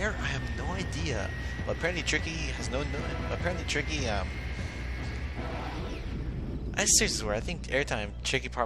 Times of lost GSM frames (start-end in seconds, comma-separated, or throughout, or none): none